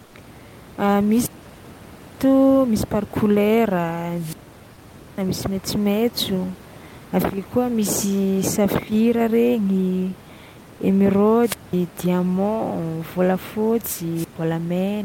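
At 0.05 to 0.13 s, about 80 ms of the real room background gives way to comfort noise in place of the background, likely from Opus discontinuous transmission. Unlike a noise gate's silence, a smooth, featureless hiss remains, about 5 dB quieter than the surrounding room noise.

Wireless microphone squelch dropouts follow at 1.09 to 2.24 s, 4.13 to 5.24 s, 11.42 to 11.73 s and 14.15 to 14.36 s. Each time the FM signal fades, static swells, and then the receiver mutes for about 0.94 s, 0.85 s, 0.2 s and 0.12 s respectively. That rising hiss before the hole distinguishes it from a clean digital packet dropout.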